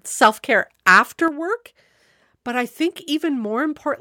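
At 1.28 s, just after "self care after", the speech drops abruptly by about 6 dB and stays lower to the end of the clip. This is one channel dropping out: one side of the stereo pair likely went silent, halving the shared signal in the mono sum.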